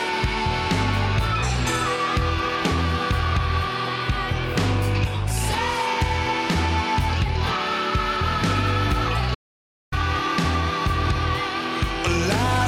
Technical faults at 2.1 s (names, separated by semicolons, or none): none